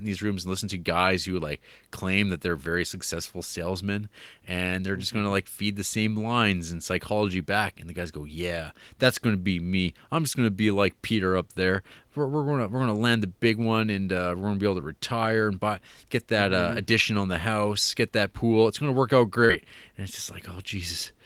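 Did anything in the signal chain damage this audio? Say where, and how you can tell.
Yes. Short concealed packet loss at 19.45 to 19.51 s, just after "gonna work out", puts the damage at the network stage, with the call's decoder covering for it. About 40 ms of audio never arrived in time, and the receiver filled roughly 37 ms of that by extending the preceding sound before blending back into real audio. It is heard as a brief smear where the sound should have continued cleanly.

Overlapping that, from 19.49 to 19.55 s, is a lost packet rebuilt from error correction: 40 ms played back from the low-bitrate redundant copy that Opus carries in the following packet, which fits two lost packets. There is no gap here. Instead the rebuilt stretch sounds rougher and noisier than the audio around it, because the copy holds far less detail than the original frames did.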